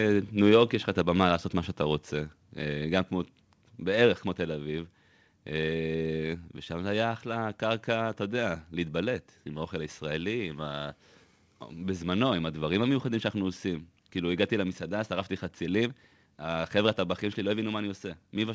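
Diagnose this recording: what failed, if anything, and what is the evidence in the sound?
Microphone overload at the converter, 0.47 to 0.55 s: peaks exceed full scale by about 2 dB and are flattened into a harsh crackle, likely from excessive input gain.

Microphone volume stepped down in call processing: speech and background drop abruptly by about 4 dB at 1.02 s and about 3 dB at 2.04 s, likely automatic gain control reacting to the clipping.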